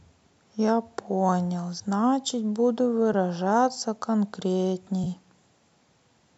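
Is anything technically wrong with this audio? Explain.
Yes. The speech has AAC frame loss with concealment at 3.13 s and from 5.04 to 5.07 s, consistent with one and then two lost frames. The decoder filled each gap from its last good spectrum, leaving a brief smeared, phasey blur rather than the hard silence or click of a plain dropout. The light coding damage throughout is likely from low-delay AAC coding.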